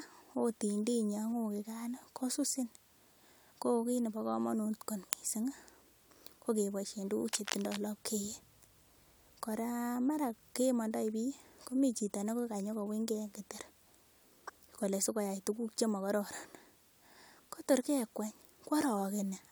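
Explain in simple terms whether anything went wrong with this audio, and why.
Cable scratch noise appears from 7.29 to 7.77 s, about half a second of rough scratching or rustling laid over the speech, loud enough to catch the ear but still quieter than the talking. The likely cause is a worn cable, plug or control being moved during recording. When its metal contacts shift and rub, the electrical connection flickers rapidly between good and poor, and each flicker injects an irregular burst of noise into the sound.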